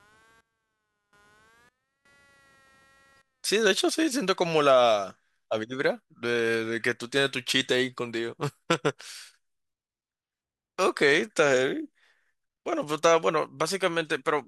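From 0 to 4.15 s, changing load on the computer disturbs the ground shared with the audio circuit, producing computer activity noise: a faint buzzing chirp pulsing around 200 times a second, about 40 dB below the speech, which follows the machine rather than the talking.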